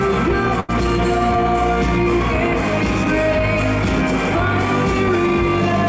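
At 0.60 to 0.70 s, a burst of packet loss: with packets gone, the receiver held and faded the last sound for 85 ms, then playback resumed 80 ms further on.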